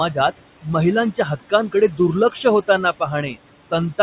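Throughout, the background sinks between phrases and swells under the speech. These are noise suppressor artifacts, pulling the room noise down by about 18 dB.

At 1.12–1.52 s and 1.9–1.99 s, short bits of speech sound swallowed, dropping by about 13 dB and about 10 dB. This is speech cut by the noise suppressor, which mistook it for noise.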